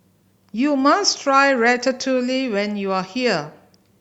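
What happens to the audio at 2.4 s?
Nothing goes wrong at 2.4 s: the speech carries on cleanly through that moment, with no dropout, click, glitch or other audible fault.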